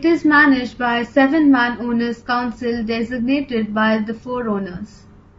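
Throughout, the speech sounds grainy, with noise between harmonics and a lowered or synthetic top band, likely low-delay AAC compression around 32 kbps.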